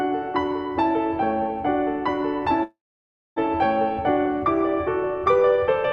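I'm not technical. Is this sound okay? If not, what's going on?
No. Call audio freeze, 2.63 to 3.38 s: the music stalls into a short fading sound, then silence, likely from delayed network packets, and resumes where it stopped.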